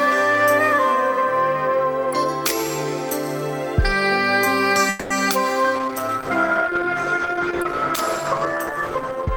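At 4.89 s a call audio freeze interrupts the sound, most likely because packets were delayed in transit and the jitter buffer emptied. For about 0.23 s the receiver keeps the last sound going as a fading buzz instead of dropping to silence. When the delayed audio arrives, playback picks up exactly where it left off at 5.12 s, so nothing is lost, but everything after that point now runs about 210 ms later.

From 5.76 s to the end of the clip there is a call bitrate drop: the bandwidth estimate fell and the encoder was forced onto far fewer bits, consistent with a fall from around 96 kbps to around 12 kbps. The coarser coding makes the sound rough and watery, and the upper frequencies are trimmed away, leaving it muffled. It stays at that degraded level for about the final 3.5 s with no recovery.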